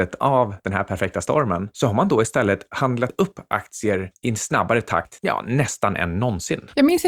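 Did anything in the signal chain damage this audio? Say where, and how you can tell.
Yes, the damage looks like it happened at the driver or buffer stage, as audio missing between chunks. The speech jumps forward at 3.10 s, just before "upp aktier i en", and again at 5.05 s, right after "aktier i en snabbare". Each skip drops roughly 40 ms and splices the two sides together with no gap. The jumps sit about 2 s apart, so the likely cause is a recorder working in 2-second chunks and losing a sliver at each handover.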